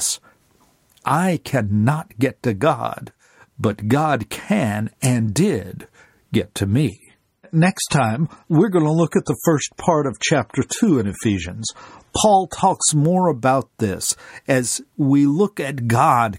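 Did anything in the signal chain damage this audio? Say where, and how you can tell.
Yes. At the network and codec stage, the stream switched to a lower-bitrate version from 6.89 s, just after "and did get to", until 12.89 s, before "more about this as". The treble suddenly thins and turns swirly and metallic, with no gap in the sound, which fits an adaptive player dropping from about 128 to 32 kbit/s MP3. On a spectrogram, the upper band is abruptly cut off and smeared for those six seconds.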